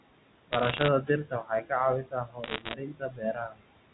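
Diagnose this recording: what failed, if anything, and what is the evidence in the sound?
Noise suppressor artifacts, in the call processing: the background sinks about 21 dB between phrases and returns under speech. On a spectrogram the noise floor pumps.

Bit errors on a digital phone line, in the G.711 transmission path: sharp ticks from 0.52 to 0.88 s and from 2.44 to 2.74 s. The waveform shows isolated single-sample spikes, and the spectrogram shows thin full-band vertical lines.

Speech cut by the noise suppressor, also in the call processing: from 1.03 to 1.71 s and from 2.03 to 3.64 s, soft sounds and endings drop out, by up to about 18 and about 21 dB. The spectrogram shows speech energy gated away along with the noise.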